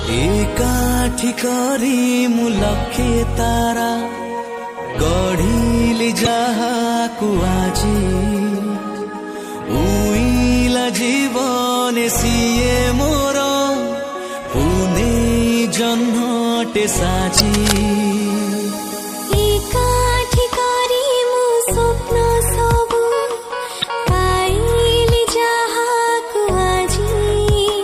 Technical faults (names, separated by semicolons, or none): MP3 compression; damaged data in a compressed stream; cable scratch noise